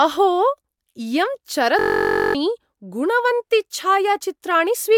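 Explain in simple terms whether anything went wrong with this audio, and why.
A system hang loop strikes from 1.79 to 2.35 s. The computer stalled while the sound hardware kept replaying one 21 ms scrap of speech, 26 times, which fits a 1024-sample buffer. That makes a steady buzz near 47 Hz and drops about half a second of speech.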